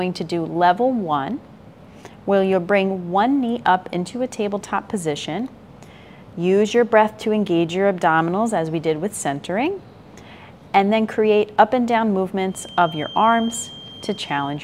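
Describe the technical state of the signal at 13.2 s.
At 13.2 s the loudspeaker-to-microphone loop is likely held just at the edge of feedback, causing a feedback whistle from 12.44 s to 14.64 s: a thin, steady 3.2 kHz tone roughly 20 dB below the sound, swelling and fading slowly in level.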